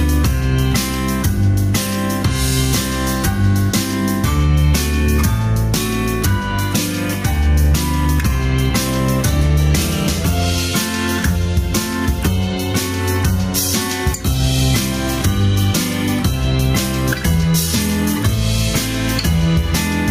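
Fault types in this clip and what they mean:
gain pumping: Throughout the clip, the level breathes in and out. The gain drops sharply as soon as a loud sound arrives, a swing of around 10 dB. This is likely input gain set far too high, with a fast limiter or compressor clamping down on every peak and releasing between them. Loud and soft passages end up pressed close together, so the sound is flattened and squashed.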